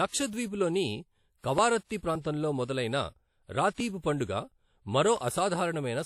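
Across the whole speech clip there is plainly audible codec damage, likely WMA compression at a low bitrate, consistent with about 48 kbps. Nothing remains above 15.6 kHz, and the block-spread quantisation noise gives a ringing, washy quality with hiss that rises and falls with the speech.

Pre-echo appears at 1.39 to 1.44 s, just before "కవారత్తీ ప్రాంతంలో మొదలైన", and again at 3.98 to 4.04 s. Noise sized for a loud onset fills the quiet moment before it for 46 ms and 55 ms, so each attack arrives behind a brief hiss and sounds softened and smeared.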